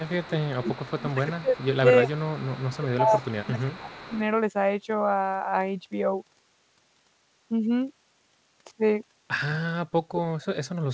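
From 0.0 to 0.89 s a faint delayed copy of the speech trails about 360 ms behind, around 15 dB down. This is an echo leak, likely a far-end loudspeaker's sound reaching its microphone and slipping past the echo canceller. Quieter echo, about 25 dB down with the same 360 ms delay, returns at 1.12 to 1.66 s, 2.14 to 2.96 s and 3.2 to 4.17 s.

Overlapping this, from 0.7 to 1.86 s and from 2.03 to 4.18 s, the speech dips in patches by up to roughly 20 dB. A sharper dip of about 40 dB follows at 10.06 to 10.24 s. This is speech suppressed in double talk, likely an echo canceller that could not separate the talker from the returning echo and turned both down.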